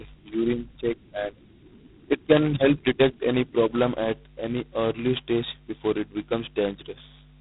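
Speech, with G.726 ADPCM damage throughout. A harsh, rasping hiss rides on the voice and rises and falls with its level. Nothing passes above about 3.9 kHz. The heavy coarseness fits the lowest 16 kbit/s rate, with only two bits per sample.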